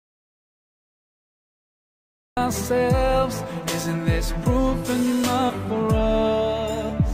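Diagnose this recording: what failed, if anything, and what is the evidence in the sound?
An audio dropout to silence is already under way when the clip begins and lasts until 2.37 s. The gap is silent with no room tone, unlike a quiet room or a gated pause. That points to the input stage, with the signal likely lost while the recorder kept writing silence.

Compressed frames skipped at the codec or decoding stage produce jumps at 5.49 to 5.52 s and 6.89 to 6.92 s, losing about 100 ms and about 70 ms. The losses fit whole 20 ms frames. There is no silent gap, which separates this from a dropout.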